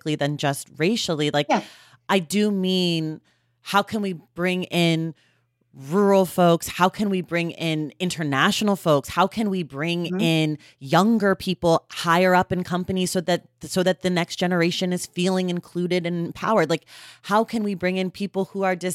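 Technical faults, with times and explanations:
No technical faults can be heard anywhere in the speech signal.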